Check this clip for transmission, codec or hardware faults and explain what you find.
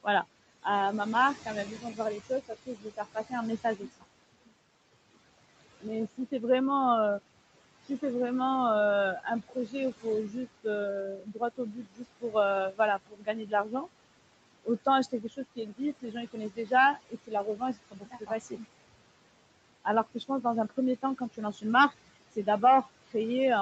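Two faults from noise processing run through this speech recording. Throughout, the background pumps down between phrases and back up under them. These are noise suppressor artifacts from frame-by-frame band gating that removes about 21 dB of steady noise. The room noise sits about 14 dB below the speech, and nothing passes above 8 kHz from the call microphone chain.

Speech cut by the noise suppressor makes quiet syllables and word endings sound swallowed at 0.03–0.66 s, 1.35–4.52 s, 5.14–6.33 s (just before "vraiment euh si c'est"), 9.2–13.87 s (just after "si c'est vraiment euh"), 14.64–18.65 s and 19.84–23.15 s. The suppressor mistook soft speech for noise and pulled it down by up to about 21 dB, affecting roughly a second or more in the 1.35–4.52 s, 9.2–13.87 s and 14.64–18.65 s stretches.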